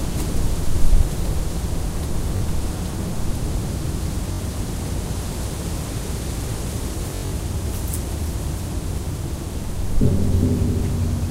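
Around 2.37 to 2.42 s the audio catches on itself: that's Bluetooth stutter, where late or missing packets make the receiver replay its last short slice. It happens again at 4.33 to 4.41 s, and most noticeably from 7.10 to 7.33 s, where roughly 170 ms drops out in bursts and the longest run of about 85 ms turns into a brief machine-gun buzz. Each time, the sound picks up further along, as if it had kept playing.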